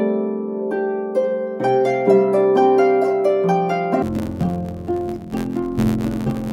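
From 4.02 s to the end at 6.52 s, interleaved audio is read as planar. Each block of alternating left and right samples is split into halves, each half treated as one channel and stretched to double length. The blocks here last 11.61 ms, which fits a 512-sample buffer, so the sound turns dull and robotic with a buzz at 86.1 Hz. Unlike a real pitch drop, it shows no clean octave shift, and the pace stays intact.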